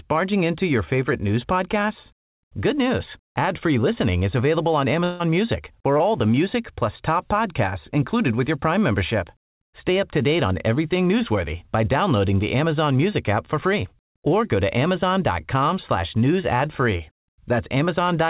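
Long network dropout, 5.04 to 5.22 s: a fading buzz fills about 160 ms, likely lost packets concealed by the receiver, and the speech resumes past the missing stretch.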